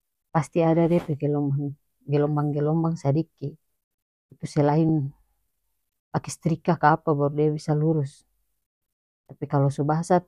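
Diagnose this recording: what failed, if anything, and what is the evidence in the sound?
Lost LE Audio frames, at the wireless link and decoder stage. At 4.89 s the speech briefly smears into a short burst of noisy texture, about 10 ms long, which fits a single lost 10 ms frame. The gap is too short for the fade toward silence to take hold. The LC3 decoder had no data for that slot. It repeated the previous frame's spectrum with randomised signs. That keeps the level steady but scrambles the tonal detail.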